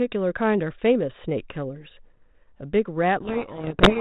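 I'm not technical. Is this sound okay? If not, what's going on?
No. From about 3.20 s to the end, the speech gets buried under harsh, gritty distortion. That's a codec payload misread: the two ends of the phone link disagree on the bit order inside each chunk of compressed audio, so the decoder rebuilds the wrong sound.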